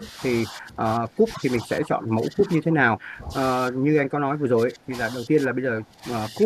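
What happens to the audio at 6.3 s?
An echo canceller likely took talk from both ends at once as its own loudspeaker echo and turned everything down. The result is speech suppressed in double talk from 6.29 to 6.44 s, with the speech dipping by roughly 10 dB.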